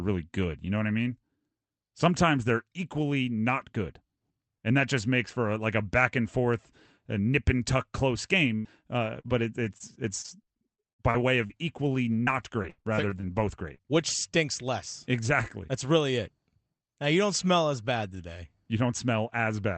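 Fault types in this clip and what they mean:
burst of packet loss: At 8.55 to 8.67 s, right after "nip and tuck close", about 100 ms of audio never arrived in time. The receiver stretched the last sound across the hole while fading it down, then jumped ahead, so that stretch of speech is simply gone.
lost packet rebuilt from error correction: At 8.73 to 8.75 s, one 20 ms frame went missing, but the next packet carried a low-bitrate Opus backup copy. The decoder played that copy, so there is no gap, only a brief rougher, noisier patch.
short concealed packet loss: At 8.81 to 8.84 s, about 20 ms failed to reach the decoder. The receiver extrapolated the preceding sound to bridge it and blended back into the real signal, leaving a quick smear or wobble in the speech.
repeated packet loss (robotic sound): From 9.2 to 14.08 s, ending just before "stinks less", 20 separate gaps recur, the longest 86 ms. 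About 13% of the span is patched with continued sound, roughly 0.7 s, giving choppy, robotic speech with fragments missing.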